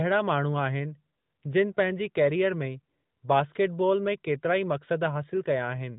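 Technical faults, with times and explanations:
The speech arrives through a narrowband mobile path that fits AMR-NB at its highest mode, with nothing above about 3.8 kHz and only light coding damage, and no technical faults can be heard.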